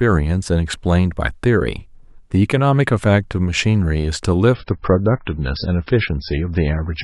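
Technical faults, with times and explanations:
4.54 to 7.03 s, adaptive stream at a lower bitrate: the speech suddenly turns dull and swirly with no gap, losing everything above 5.6 kHz as codec artefacts pile up. That fits the player dropping from roughly 128 kbit/s MP3 to about 16 kbit/s when the connection slowed.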